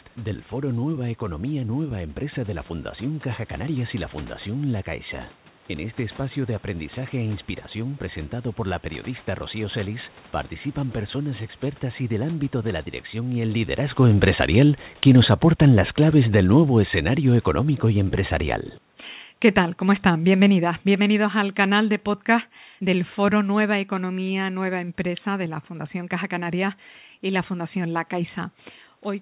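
At 12.92 s, after "del ámbito de la", automatic gain falling begins: the gain control judged the input too loud or its background noise too strong and pulled its level down by about 14 dB until 24.49 s. Unlike the talker moving around 13.5 s, the room noise sinks along with the speech.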